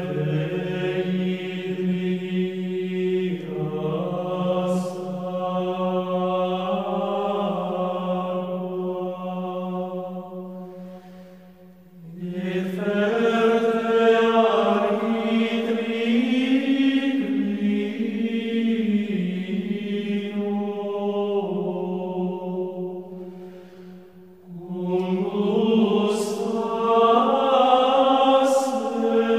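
Nothing stood out on listening to the clip.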